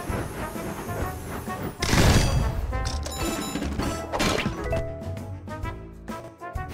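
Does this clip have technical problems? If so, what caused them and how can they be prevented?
Yes, there are two brief spots where chunks play out of order, at 3.28 to 3.36 s and again at 6.2 to 6.28 s. Each time a 40 ms block of audio shows up one block late, so it swaps places with the block that should follow it. Nothing goes missing, but that 80 ms stretch sounds scrambled, and each swap puts three hard joins in quick succession. To prevent it, sequence-number each chunk and reorder them in a jitter buffer before playback or writing.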